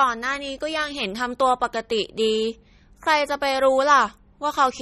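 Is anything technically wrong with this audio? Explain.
Yes. MP3 compression damage runs through the whole speech clip and is plainly audible, likely from low-bitrate encoding, with a sound that fits roughly 32 kbps. Nothing is present above 15 kHz, where the encoder cut the treble to save bits. Below that, weak spectral lines are dropped and restored from frame to frame, so the sound turns watery and swirling, s sounds take on a metallic chirp, and consonant onsets lose their sharpness and smear.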